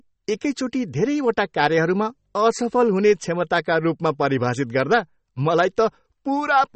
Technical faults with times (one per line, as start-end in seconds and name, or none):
0.00-6.76 MP3 compression